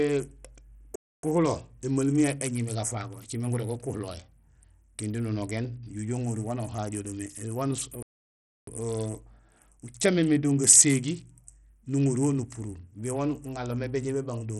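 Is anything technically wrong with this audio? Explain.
Yes. Throughout the speech, likely Bluetooth SBC compression: nothing above 13.9 kHz, with gritty, flickering treble from starved top sub-bands, which points to a low bitrate around 64 kbps.

Playback stalls silence the sound mid-flow at 0.96 s for 0.28 s and at 8.03 s for 0.65 s, likely from the player running short of data.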